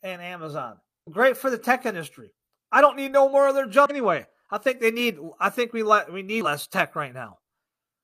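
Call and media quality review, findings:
Damaged data in a compressed stream: decoder lost frame sync. Short glitches at 1.03 s (before "great for the tech"), 3.86 s (after "no more of their") and 6.41 s (after "think we let we").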